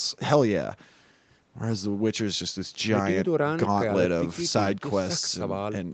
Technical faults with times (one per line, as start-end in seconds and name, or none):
none